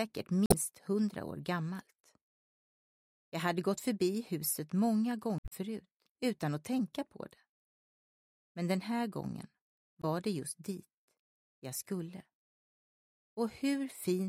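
Damaged data in a compressed stream corrupts three short stretches. Where the bytes are wrong, the decoder misreads or rejects those frames, loses its place in the stream and has to search for the next valid frame header before output recovers. Each break sounds like a brief chirp, squawk, click or short hole in place of the intended audio. It appears at 0.46–0.54 s, again and longer at 5.38–5.53 s, and as a very short blip at 10.02–10.05 s.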